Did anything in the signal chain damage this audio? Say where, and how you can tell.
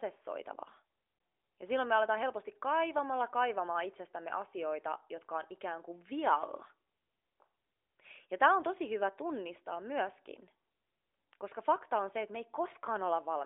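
No, nothing in this speech recording stood out as damage from any stage of the signal chain on listening.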